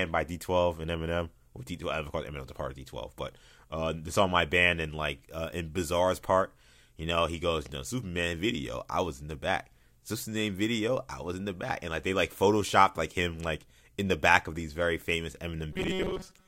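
From 15.73 s to the end at 16.47 s, the speech turns into robotic sound from repeated short buffers. It sounds like a rigid, metallic buzz fixed at 188 Hz. It follows the original speech only roughly. The likely cause is new audio arriving too seldom. To fill the gaps, the playback repeats a tiny slice, which fits a buffer of about 5 ms. Around seven tenths of this stretch is repeated material, so real speech is skipped.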